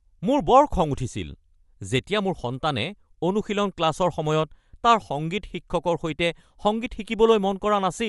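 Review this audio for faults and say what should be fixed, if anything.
Bluetooth LC3 compression, throughout the clip: the speech carries plainly audible coding damage, and nothing is present above 11.6 kHz. The likely cause is an LC3 link, the transform codec of Bluetooth LE Audio. It splits the signal into short frames and spends a limited bit budget on each, cutting away the top band and coarsely quantising what remains. The result fits 10 ms frames at a bitrate around 48 kbps. To prevent it, record over a wired or high-bitrate connection instead of a Bluetooth LE Audio path.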